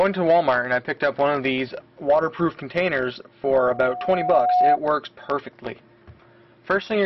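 A loudspeaker feedback squeal rises from 3.52 s to 4.78 s: a 727 Hz tone swells over about a second to roughly 5 dB above the audio, as the microphone hears its own loudspeaker and loop gain tops unity. A spectrogram shows one bright horizontal line; the waveform envelope bulges.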